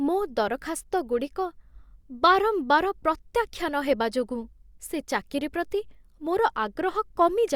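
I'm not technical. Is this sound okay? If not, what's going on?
Yes, this speech sounds fine, with no problems to hear.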